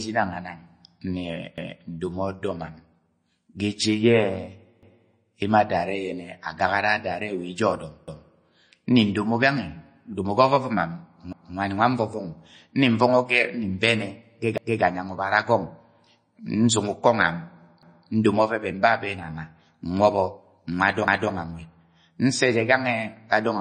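Throughout the speech, the sound is watery and swirly with nothing above 9.4 kHz. This is likely MP3 compression, starved of bits, which fits a low bitrate around 32 kbps.

Overlapping chunks cause stutters at 1.58, 4.83, 8.08, 11.33, 14.58, 17.83 and 21.08 s. At each join, a 250 ms piece plays twice because the next chunk starts before the last ends.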